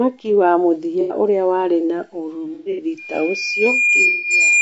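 Across the whole speech clip there is a rough, grainy quality, with noise filling the gaps between harmonics and a thin, synthetic-sounding top band. This is most likely low-delay AAC compression (AAC-ELD) at a rate that sounds close to 32 kbps, where short frames resolve pitch poorly and starve the harmonics of bits. On a spectrogram the harmonic stripes look blurred and speckled, and the upper band looks patchy and smeared.

At 1.01 to 1.15 s, about 90 ms of audio goes missing and is replaced by a smeared, noisy patch. This is AAC frame loss with concealment: the decoder rebuilds lost frames from the last good spectrum with randomised phase. A second episode runs from 2.54 to 2.86 s, with about 180 ms lost in scattered pieces and the longest gap near a tenth of a second, so it sounds phasey and broken up. A third, about 150 ms long, falls at 4.07 to 4.33 s. On the spectrogram each one shows as a block of diffuse, structureless energy where the harmonics vanish, and the waveform envelope flattens there.

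From 2.98 s to the end at 4.62 s, a loudspeaker feedback squeal appears. The microphone is picking up the speaker it feeds, and the loop gain exceeds one at 2.4 kHz. That single tone swells over roughly one and a half seconds until it sits a few dB above the speech. It appears as a thickening horizontal line at 2.4 kHz, with the waveform envelope steadily rising beneath it.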